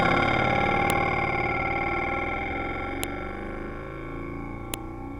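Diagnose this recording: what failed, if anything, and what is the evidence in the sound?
Sharp clicks at 0.90, 3.03 and 4.74 s point to a file header played as audio, a storage-stage fault. WAV pieces were joined with their header bytes intact, so those bytes play as samples. Each shows as a brief spike on the waveform and a full-height vertical line on the spectrogram.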